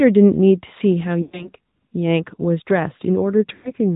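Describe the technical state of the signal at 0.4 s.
At 0.4 s, as throughout, the AMR narrowband mobile codec's 8 kHz sampling cuts everything above 4 kHz and its vocal-tract model adds a buzzy, synthetic edge that plain band-limiting lacks, which fits a 10.2 kbps mode.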